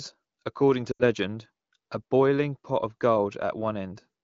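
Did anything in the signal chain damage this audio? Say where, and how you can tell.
Yes. Lost AMR speech frames on the radio link: from 0.92 to 1.03 s the speech smears and fades as the AMR-WB decoder repeats its last pitch and vocal-tract settings at falling gain, which fits about four lost frames.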